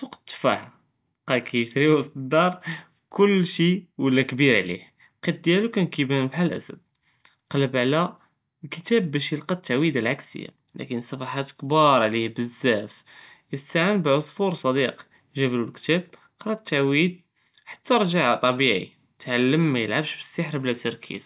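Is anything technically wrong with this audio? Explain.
No, the speech signal shows no technical faults of any kind, with nothing in its level, timing or continuity departing from what a correctly working capture and playback chain would produce.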